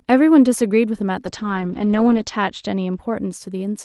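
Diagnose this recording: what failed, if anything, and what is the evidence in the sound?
A call bitrate drop hits the network and codec stage from 1.27 s to 3.05 s. The speech turns rough and muffled. Its top end shrinks from 12 kHz to 8 kHz. That fits the encoder being squeezed from 32 to 9 kbps, worst for about a second.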